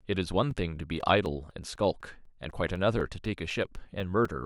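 From 0.26 s to 4.25 s, the speech has periodic USB or driver dropouts. Every 0.25 s, something blocks the audio path. Roughly 4 ms of sound drops out and is filled with silence. This repeats about fifteen times, heard as a steady ticking under the speech.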